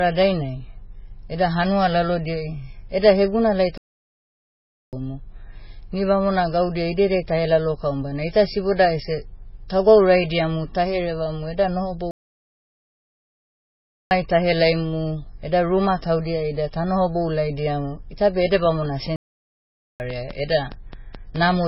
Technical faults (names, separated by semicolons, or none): MP3 compression; playback stall